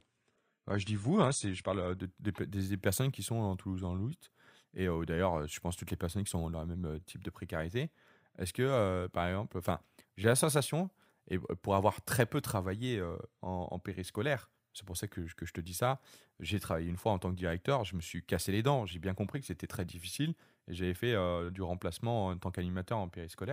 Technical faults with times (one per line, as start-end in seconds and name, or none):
0.00-2.00 adaptive stream starting at a low bitrate